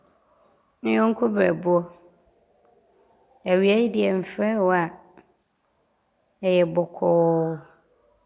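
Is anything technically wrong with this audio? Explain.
No, nothing technically wrong.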